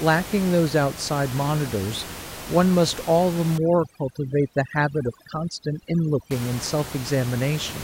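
Speech recording with room noise sitting about 13 dB below the voice, and overdone noise removal from 3.58 to 6.31 s: the noise reducer pulls bands near its noise estimate down hard, leaving a lowered background broken up into twinkling specks.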